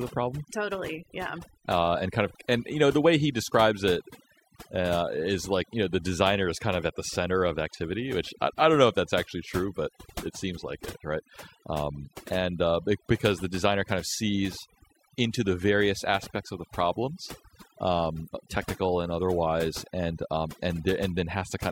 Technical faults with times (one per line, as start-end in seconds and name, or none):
0.00-21.71 overdone noise removal